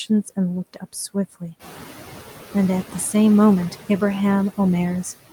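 Speech, with noise suppressor artifacts throughout. The suppressor pulls steady background down by about 9 dB between phrases, so the residue pumps under the voice. From 0.74 to 0.95 s, speech is cut by the noise suppressor. It mistakes soft speech for noise and ducks it by up to about 11 dB, swallowing roughly a tenth of a second. The room noise rises by about 11 dB near 1.5 s and then sits about 16 dB under the speech.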